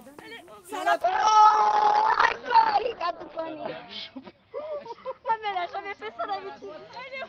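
From 1.02 s to the end, a call bitrate drop sets in: the encoder is starved of bits, which fits a fall from about 32 kbps to near 7 kbps. The band narrows from 20 kHz to 6 kHz, so the sound turns muffled and rough. On a spectrogram, everything above 6 kHz disappears abruptly.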